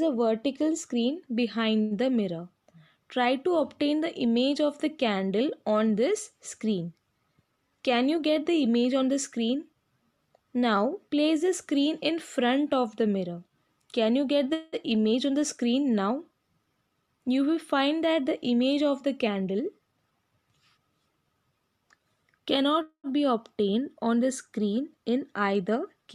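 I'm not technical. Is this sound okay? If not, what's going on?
No. At 1.81 to 1.94 s there is a short stall from a late packet: one sound is held for about a tenth of a second while the system waits for delayed audio, then carries on. Nothing is lost. It is a brief stretched sound, not a silence.

Three times the sound briefly rushes: 7.44 to 8.23 s, 16.70 to 17.29 s and 19.35 to 20.38 s. This is a jitter buffer speed-up. The system had built up too much delay, so it played about 11 to 12 percent faster, trimming tiny slivers to catch up. The pitch stays the same, so it sounds hurried rather than squeaky.

At 14.53 to 14.76 s and 22.82 to 23.07 s there are call audio freezes, likely caused by audio getting held up on its way. The last sound is dragged into a fading buzz or hiss for about 0.19 and 0.22 s. In the second one it fades to about 0.09 s of silence. Then the sound resumes where it stopped. 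These are longer than the first stall and fade away instead of simply holding.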